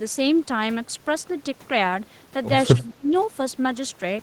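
Speech suppressed in double talk occurs from 2.75 to 3.09 s. The speech sinks sharply, falling by around 30 dB at its deepest, and roughly a third of a second of it is pushed down before the level returns. The likely cause is an echo canceller that, with both ends talking at once, could not tell this talker apart from the loudspeaker's echo and attenuated everything it heard, genuine speech included.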